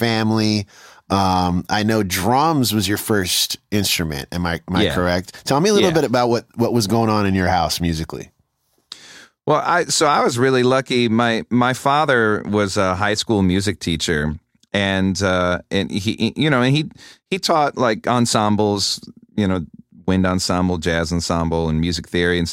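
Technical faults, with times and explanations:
Nothing stood out on listening to the speech here.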